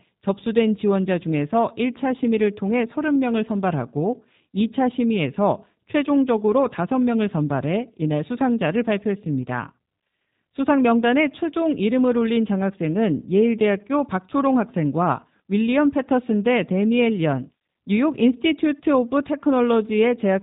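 Throughout, G.729 codec damage is plainly audible. Nothing above 3.8 kHz survives. The speech is rebuilt from a model, so it sounds rough and synthetic.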